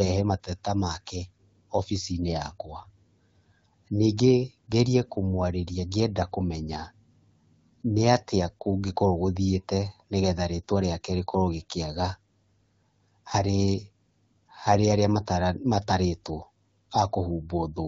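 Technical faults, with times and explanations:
The speech is carried through the AMR wideband (HD Voice) codec at 12.65 kbit/s, a rate at which it codes speech up to 6.4 kHz and fills the band to 7 kHz with shaped noise, leaving only light coding damage.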